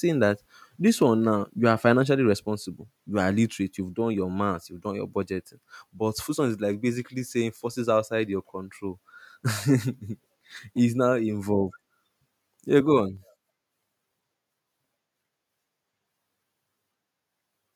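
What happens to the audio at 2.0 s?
At 2.04 s, between "one now you are" and "responsible you are literate", the level of the speech and the background drops together by about 2 dB in a single step: a microphone volume stepped down. The likely cause is the call software judging the input too hot and lowering the device's capture volume at once. On a waveform the envelope steps down abruptly at that instant, and a spectrogram shows every band dimming together.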